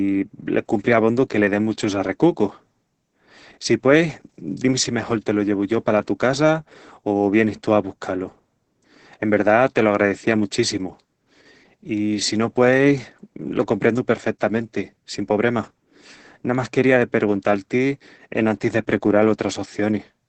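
Speech throughout with heavy Opus voice compression: nothing above 8.6 kHz, coarse hoarse robotic texture, consistent with SILK wideband coding at roughly 10 kbps.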